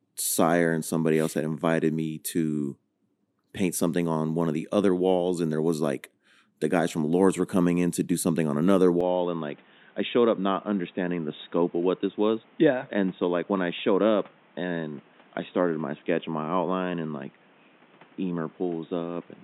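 Right after "do something on another", at about 9.01 s, the speech suddenly goes dull and boxy and stays that way to the end. Nothing gets through above 3.8 kHz, the level drops by roughly 5 dB, and new background noise appears, sitting around 30 dB under the speech. There's no gap at the change. It sounds like the input switched to a poorer device, likely another mic or a headset's call profile.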